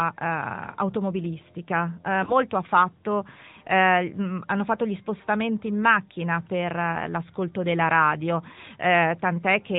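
Throughout, the AMR narrowband mobile codec limits the speech to below 4 kHz, and its vocal-tract modelling leaves a plainly audible buzzy, synthetic edge consistent with a 10.2 kbps mode. From 2.24 to 2.34 s, between "automobilistica eh" and "ha fatto eh mm", lost AMR speech frames cause a brief dip or warble as the decoder conceals what sounds like a single missing 20 ms frame.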